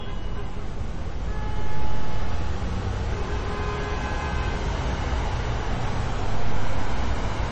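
An everyday-sound recording carries MP3 compression damage from start to finish, plainly audible throughout. Nothing survives above about 8.2 kHz, where the encoder has sheared off the treble, and the remaining detail has a watery, swirling texture as weak frequency components flicker in and out between frames, which fits a starved bitrate near 32 kbps. That swirl is what separates it from a simple low-pass filter, which would dull the top end cleanly; a low-bitrate MP3 encode is the likely cause.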